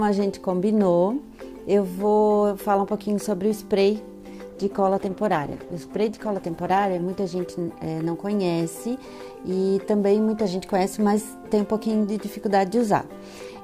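From 4.5 s to 9.21 s the sound turns rough, watery or muffled, and clears again by 9.21 s, staying at its worst for about 2.15 s. This is a call bitrate drop. The call's bandwidth estimate fell, so the Opus encoder was told to spend far fewer bits, which fits a fall from 128 kbps to about 13 kbps. At that rate the encoder codes more coarsely and also cuts away the upper frequencies.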